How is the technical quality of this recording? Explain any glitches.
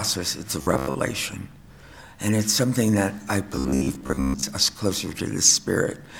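Robotic sound from repeated short buffers appears at 0.62 to 0.95 s and 3.56 to 4.49 s. Late-arriving audio was likely patched by looping roughly 15 ms segments, replacing about half, then most, of the sound, imposing a rigid metallic 66.7 Hz buzz.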